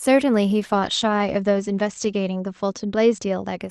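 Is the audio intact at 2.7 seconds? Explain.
No. At 2.7 seconds the speech sounds rough and watery, and its top end is dulled. This is a call bitrate drop that runs from about 0.63 to 3.65 s. The call's bandwidth estimate fell, so the Opus encoder went from 40 kbps down to 12 kbps, holding the lowest rate for about 1.5 s. With so few bits it codes coarsely and narrows the audio band from 12 kHz to 8 kHz.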